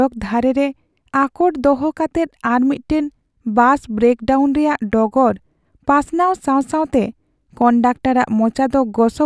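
No technical faults can be heard anywhere in the speech. Nothing in the audio calls for a timestamp or a second listen.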